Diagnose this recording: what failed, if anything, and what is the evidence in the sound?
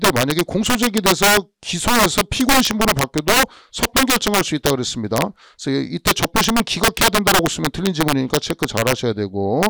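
Integer overflow in the sample-format conversion or integer gain stage: throughout the clip, loud peaks burst into violent, sharp cracks. The signal is driven about 12 dB too hot, and the few percent of samples exceeding full scale wrap to the opposite sign instead of being limited.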